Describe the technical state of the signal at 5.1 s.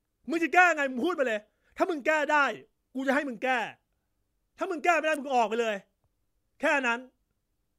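At 5.14 to 5.16 s an electrical switching spike lands on the speech, a sharp snap or tight burst of clicks peaking at about -25 dBFS. It is likely a nearby switch or discharge arcing into the line. Unlike a dropout, the speech continues underneath, unbroken.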